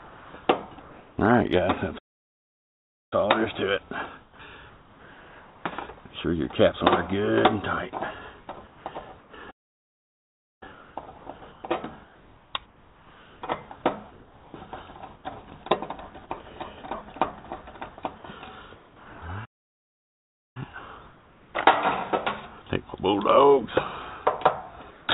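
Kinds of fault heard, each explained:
Comfort noise in place of the background: In the quiet stretches, including 0 to 0.34 s and 18.76 to 19.22 s, the real background gives way to steady, featureless hiss about 3 dB quieter, likely from discontinuous transmission. Unlike a gate or dropout, the pause never falls to true silence.
Playback stall: Three times, at 1.98 s, 9.50 s and 19.45 s, the sound halts mid-flow and the output goes completely silent for about 1.1 s before carrying on, likely from the player running short of data. Unlike a brief packet-loss gap, nothing is smoothed over.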